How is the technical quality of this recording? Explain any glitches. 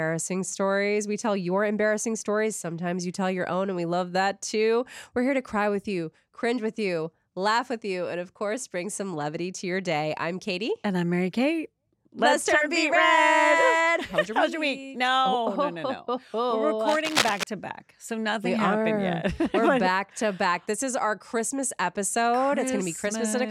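A single glitch stands out, a burst of cable scratch noise from 16.82 to 17.44 s. Dense, uneven scratching and rustling rides over the sound, only slightly quieter than it. The likely cause is a worn cable or connector being moved, its contact resistance fluctuating rapidly.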